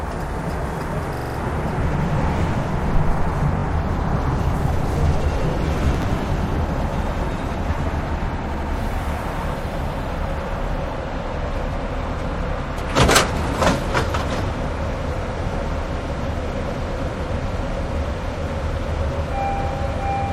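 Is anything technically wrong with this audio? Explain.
Yes. Repeated frames occur at 1.15–1.36 s, 3.58–3.63 s and 8.53–8.70 s. A short block of compressed audio was delivered more than once, so the decoder replays it. The first is a 42.7 ms block heard five extra times, adding 213 ms. The second is a 21.3 ms block heard twice more. The third is an 85.3 ms block repeated twice. Each is heard as a stutter, and the block sizes fit frames of about 21 ms.

Processor overload crackle appears from 5.95 to 6.19 s. The processor missed several deadlines for buffers of around 10 ms, roughly five of them, and each missed slot replayed stale audio with hard edges. The result is a brief gritty crackle riding over the sound.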